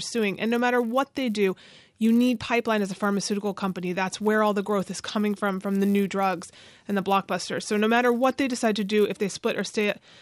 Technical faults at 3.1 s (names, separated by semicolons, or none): resampler restarted on every block